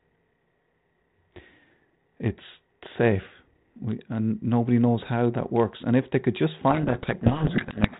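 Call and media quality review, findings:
Codec payload misread, 6.7 s to end, after "if they could just": speech buried in harsh distortion. G.726 code-word bit order mismatched between sender and receiver; decoder misreads each sample difference.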